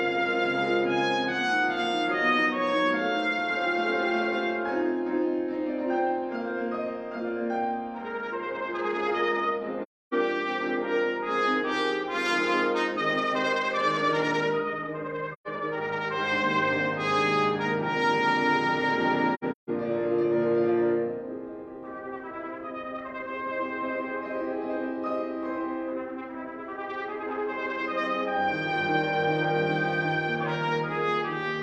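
Three soft-edged dropouts here, classic AAC frame loss with muting: about 0.3 s gone at 9.82–10.14 s, a shorter hole at 15.33–15.48 s, and a broken patch at 19.34–19.70 s with the longest gap around 150 ms. The decoder zeroed the lost frames' spectrum, so overlapping windows fade the audio out and back in.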